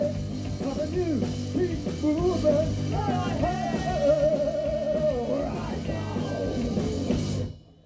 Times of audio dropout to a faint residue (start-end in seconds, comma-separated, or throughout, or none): none